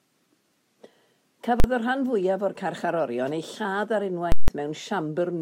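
A single sharp bang hits at 1.60 s, and at 4.32 s a loud pop opens a 160 ms gap of silence that closes with another pop at 4.48 s. These are invalid numbers at full scale: infinite or invalid results pinned each block at maximum level.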